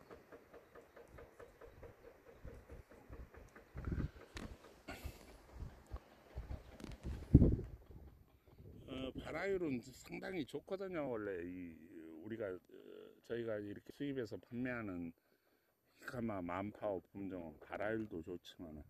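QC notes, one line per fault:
7.23 s, 11.07 s, 13.90 s, compressed frames skipped: the audio lurches ahead, by about a tenth of a second at 7.23 and 13.90 s and about 20 ms at 11.07 s. Whole compressed frames were dropped. The jump sizes fit a 24 ms frame.
7.34–8.39 s, zipper noise: a fine ticking rides on the sound as its level drops by roughly 15 dB, at about 30 ticks per second. The gain moves in unsmoothed steps, and each step leaves a small click.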